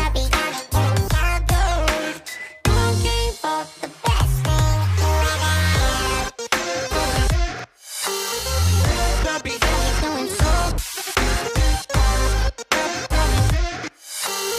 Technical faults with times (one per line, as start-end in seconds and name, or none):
none